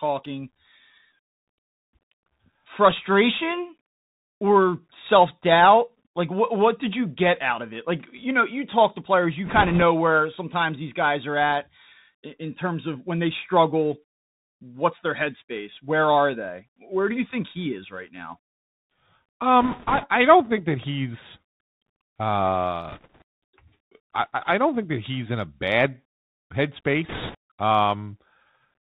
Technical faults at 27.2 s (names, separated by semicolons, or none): Bluetooth CVSD headset codec; bit errors on a Bluetooth voice link